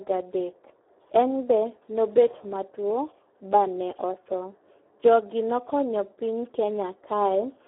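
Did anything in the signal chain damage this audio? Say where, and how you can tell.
Yes. Throughout, the speech sounds hoarse and noisy, confined to a narrow telephone band of about 300 to 3400 Hz with nothing above 3.8 kHz. This is Speex codec damage at the codec stage, heavy enough to suggest a low setting around 8 kbps, leaving too few bits to describe the excitation.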